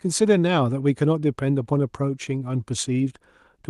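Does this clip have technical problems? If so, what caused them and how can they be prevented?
No, there are no technical problems to fix in this speech clip. It has passed through a WebRTC call path, and the high end stops at around 12 kHz, which fits a super-wideband call codec working as intended.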